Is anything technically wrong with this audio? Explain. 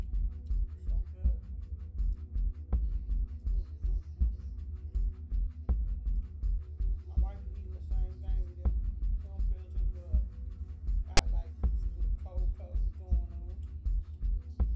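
Yes. At 11.17 s there is a single very brief burst of file tags played as audio. A block of text metadata has been decoded as if it were sample data, so the character bytes become a harsh, loud rasp that sits offset to one side rather than centred on zero. On a waveform it appears as a hard-edged rectangular slab displaced from the centre line. On a spectrogram it shows as a thin vertical stripe of broadband energy with abrupt edges.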